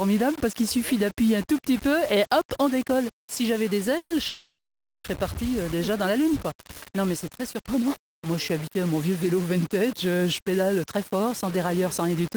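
Throughout, the audio carries a grainy distortion about 20 dB below the signal that rises and falls with the sound rather than sitting steady like hiss, likely from low bit depth without dither, around 5 bits rounded. From 3.97 to 4.13 s and again from 4.28 to 5.07 s, the last sound is drawn out into a fading buzz before going silent, for about half a second in the second case. Each time the audio then resumes where it stopped, so nothing is lost, unlike a dropout; this is likely a call audio freeze, with the jitter buffer running empty. From 10.80 to 12.35 s, a jitter buffer speed-up makes the audio run about 6% faster and sound hurried while the pitch stays the same, unlike a resampling error, as roughly 100 ms is trimmed away in tiny pieces.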